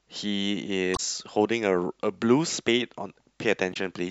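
Short glitches at 0.93 to 1.00 s and 3.70 to 3.77 s come from damaged data in a compressed stream, where corrupted frames throw the decoder out of sync.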